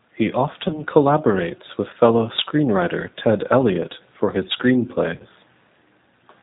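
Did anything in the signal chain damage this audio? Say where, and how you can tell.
Yes, two stages damaged it. The codec stage shows G.729 codec damage for the whole clip. Nothing is heard above 4 kHz, so the speech sounds muffled. The damage is plainly audible: the speech is slightly rough and synthetic. That fits G.729A at about 8 kbit/s. This codec does not send the waveform. It sends a vocal tract filter, a pitch predictor and a few pulses per frame, and the decoder rebuilds speech from those.

The network stage adds VoIP packet loss concealed by the speech codec, at 0.68 to 0.74 s and again at 5.18 to 5.26 s. The first is just before "collaborates with fellow screenwriter". Each gap points to one lost 20 ms packet. During each, the sound turns into a brief buzzy tone or coloured noise that fades. The decoder repeats its last pitch and filter at falling gain. The speech stays weak or distorted after each gap, because every frame builds on the previous one.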